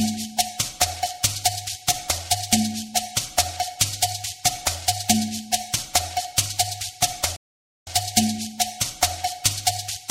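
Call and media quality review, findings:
Playback stall, 7.36 to 7.87 s: output stops mid-flow for about 0.5 s of silence, then sound continues. Likely cause: player starved of buffered data or its output thread blocked. Differs from a network dropout by its cause: a local playback halt, not lost packets.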